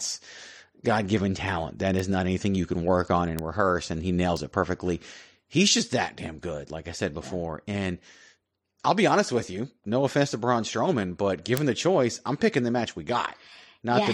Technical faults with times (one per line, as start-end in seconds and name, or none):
1.99 bit error spike
3.39 bit error spike
4.37 bit error spike
11.57 bit error spike